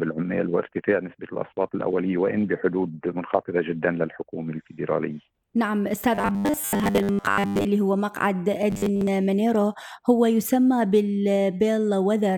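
From 6.15 to 7.65 s and again from 8.70 to 9.10 s, the sound becomes robotic, a rigid metallic buzz at 100 Hz. It is likely caused by repeated short buffers: a roughly 10 ms fragment is replayed while most of the real audio is skipped.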